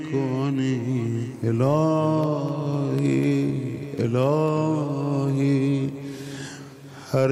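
From about 2.24 s to 4.48 s the audio picks up a run of small, evenly spaced ticks, one every 0.25 s, around ten in all. These are periodic USB or driver dropouts: something keeps stalling the USB link or audio driver on a fixed schedule, and each stall drops a sliver of signal, roughly a tenth of a millisecond, and leaves silence in its place. That tiny gap in the waveform is what you hear as each tick.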